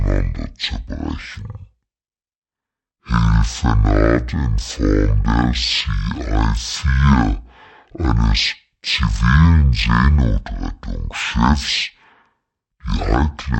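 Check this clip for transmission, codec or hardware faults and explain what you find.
The recording has a stereo-read-as-mono fault across its whole length. Interleaved left and right samples were taken one after another as a single channel, so every stereo frame became two consecutive mono samples. The speech runs at 0.5 times normal speed and sits 12 semitones down, a full octave, giving a slow, deep, dragging delivery. A fainter mirror image of the sound also shows up in the upper half of the spectrum.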